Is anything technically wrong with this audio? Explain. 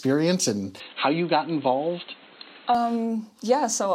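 Yes. From 0.8 to 2.75 s the sound goes dull and boxy, with nothing above 4.2 kHz, then clears again. It's likely an input switched to a poorer device, a narrower-band mic with its own faint noise floor, roughly 30 dB down, at about the same level and with no gap at either switch.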